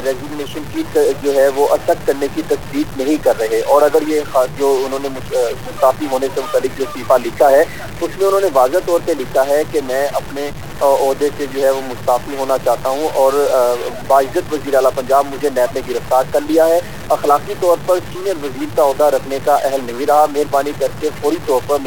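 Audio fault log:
Throughout, stuck bit: harsh, buzzy distortion on all the sound and loud noise filling pauses, likely from one data bit held fixed at a weight around -25 dBFS.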